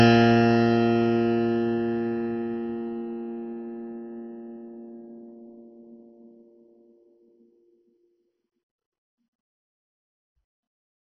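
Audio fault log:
throughout, MP2 compression: the music is dull, with nothing above about 6.1 kHz, and a gurgling, granular roughness runs through every passage. This likely comes from MPEG Layer II coding at a very low rate, which fits something around 32 kbps. The coder divides the spectrum into 32 equal sub-bands and, short of bits, switches the upper ones off entirely so that bands flicker on and off, while quantising the remaining bands coarsely.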